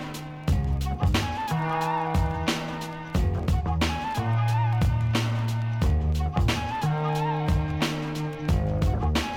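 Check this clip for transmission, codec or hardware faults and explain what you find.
No transmission, codec or hardware faults can be heard anywhere in the clip; the signal stays continuous and stable throughout.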